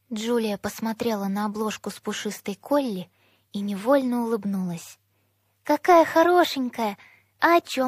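The audio has a pre-echo at 0.97 to 1.00 s: a short hiss about 22 ms long, roughly 11 dB above the quiet floor, arrives just before a sharp attack and blurs it. The codec spread quantisation noise across its whole transform block, and the timing fits a 36 ms window that never switched to short blocks. A spectrogram would show a broadband smear ahead of the onset's vertical edge, and the waveform a fuzzy lead-in before the transient.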